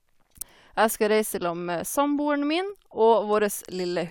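At 0.41 s the speech jumps forward as compressed frames are skipped. Roughly three frames of the encoded stream, about 70 ms of audio, never reach the output, either lost from the file or rejected by the decoder as damaged. The skip fits a frame length of 23.2 ms. Unlike a dropout, there is no gap of silence: the sound resumes further along.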